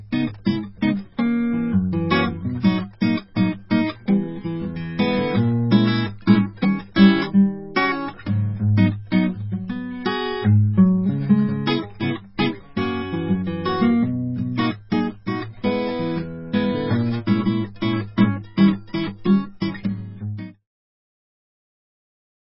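Throughout the music, nothing is heard above 5.6 kHz and the texture turns watery and swirly. This is likely heavy MP3 compression, consistent with a bitrate around 16 kbps.

At 0.45 s and again at 19.60 s, a short hiss smears in just before a sharp attack. This is pre-echo: the codec spread the quantisation noise meant for the loud hit across its block, so it leaks 12 to 13 ms into the quiet moment ahead. The second instance falls as the smooth fade-out begins, a fade that runs to 20.69 s.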